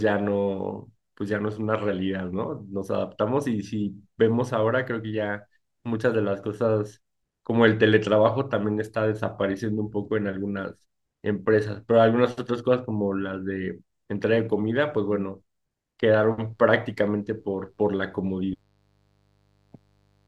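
At 16.22 s a mains buzz comes in under the speech and stays right to the end. It's a steady, raspy, gritty drone built on 50 Hz, with the harmonics stacking up well into the kHz range. That points to sharp switching spikes, twice per mains cycle, from something like a dimmer or rectifier, or an unshielded run picking up interference. It sits low, roughly 40 dB below the speech.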